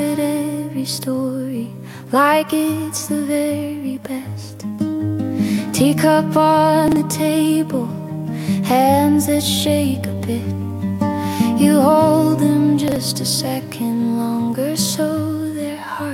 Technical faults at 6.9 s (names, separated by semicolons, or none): chunks out of order